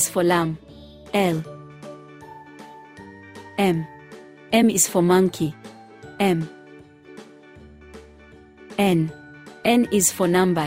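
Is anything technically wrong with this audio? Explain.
No, nothing in the audio stands out as a technical defect.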